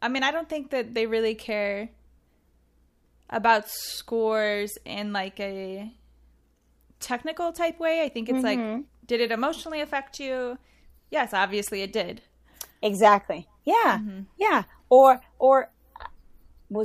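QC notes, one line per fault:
Nothing stood out on listening to the speech.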